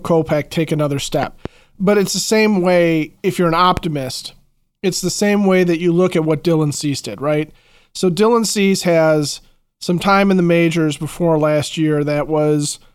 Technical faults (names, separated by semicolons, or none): loud pop